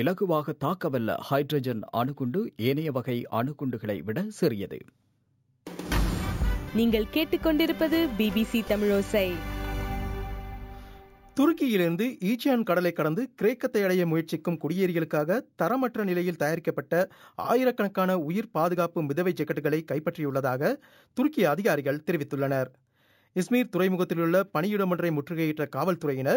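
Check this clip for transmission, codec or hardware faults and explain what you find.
One fault runs through the whole clip: imaging from sample-and-hold upsampling. Each sample was simply repeated, which fits a jump from 16 kHz to 48 kHz, leaving a mirrored spectrum at 8–16 kHz, about 23 dB down. It's a bright metallic fizz tracking the sound's level. A spectrogram shows an upside-down copy above 8 kHz; the waveform looks stair-stepped.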